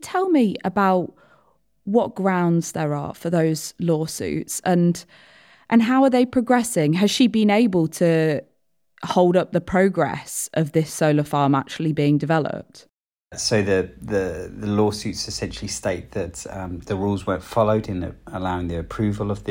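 No technical faults can be heard anywhere in the speech.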